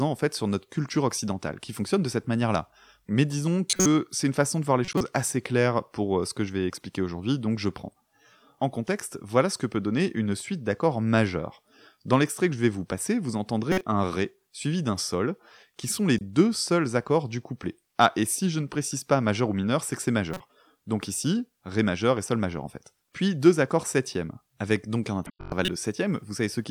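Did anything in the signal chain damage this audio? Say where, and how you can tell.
Yes, at the codec: corrupt frames decoded as chirpy bursts at 3.70–3.86, 4.85–5.01, 8.87, 13.72–13.83, 16.18–16.21, 20.33–20.40 and 25.26–25.68 s. Flipped bits put energy at the wrong frequencies.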